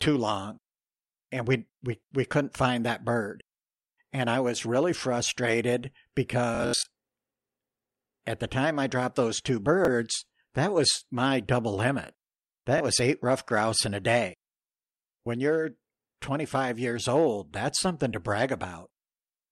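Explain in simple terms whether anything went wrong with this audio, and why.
Bluetooth stutter hits the speech at 6.55–6.88 s, 9.85–9.88 s and 12.78–12.80 s: lost packets make tiny slices repeat, not silence, then the speech skips ahead.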